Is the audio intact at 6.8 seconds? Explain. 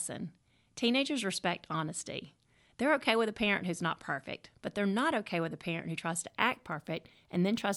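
No. From about 6.28 s right through to the end at 7.76 s there's imaging from linear upsampling. It sounds like the speech was raised to a higher rate by just drawing straight lines between samples, which fits a 24 kHz source taken up to 44.1 kHz. That's a weak filter, so the top end goes a bit dull and a mirror copy of the spectrum sits between 12 and 24 kHz, roughly 35 dB under the signal, giving sibilants a faint metallic shimmer.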